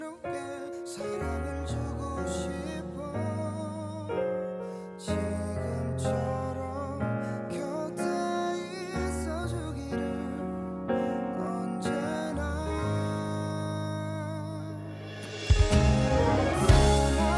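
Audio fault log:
No faults heard anywhere in this clip.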